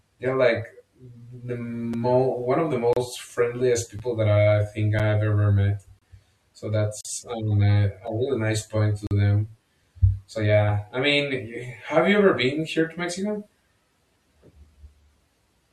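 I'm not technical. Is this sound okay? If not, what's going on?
No. It has a gap between stream segments. The audio arrives in one-second pieces, and tiny silent holes open where pieces join: at 1.94, 2.93 to 2.97 s, 3.99, 4.99, 5.99 to 6.02 s, 7.01 to 7.05 s, 8.07 and 9.07 to 9.11 s. Nothing is lost.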